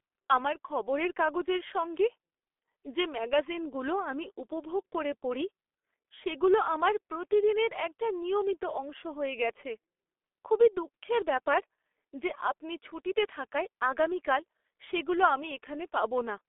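From start to finish the speech carries G.723.1 codec damage, and it is heavy. The sound is muffled and hoarse, with consonants smeared together, which fits the 6.3 kbit/s mode of this early telephony codec. Its 30 ms frames track the voice slowly, so rapid articulation blurs. On a spectrogram, energy sits in a telephone band of about 300 Hz to 3.5 kHz, with a hard ceiling and nothing above 3.6 kHz. Harmonics look smeared in blocky, frame-sized steps.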